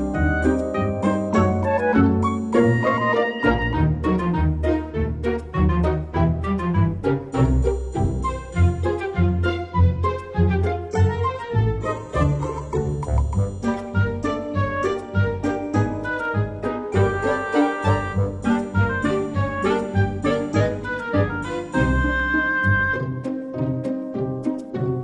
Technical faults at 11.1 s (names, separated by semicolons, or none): adaptive stream at a lower bitrate